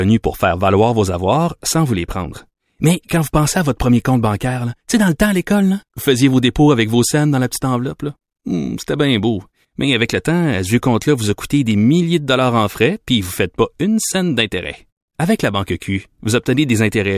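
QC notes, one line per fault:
Nothing stood out on listening to the speech in this clip.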